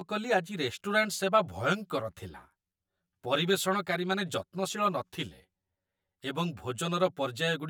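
From start to finish, the speech carries channel delay (comb filtering). One channel arrives around 10 ms late, and the two are summed to mono. Cancellation begins near 50 Hz and repeats at evenly spaced frequencies. The result sounds hollow and phasey throughout.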